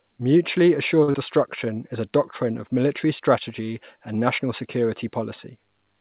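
A short stall from a late packet comes at 1.03 to 1.09 s. A packet was late, the jitter buffer ran dry, and the receiver held the last sound for about 48 ms before continuing from the same point. Nothing is lost, but the speech drags with a faint buzz or dip, and everything afterward plays 48 ms later.

Right after, at 1.11 to 1.15 s, there is a short concealed packet loss. 40 ms of speech never reached the decoder in time. The receiver filled about 31 ms by extending the preceding sound, then blended back into the real audio. It is heard as a brief smear against a band that stops at 4 kHz, which fits a G.711 call codec.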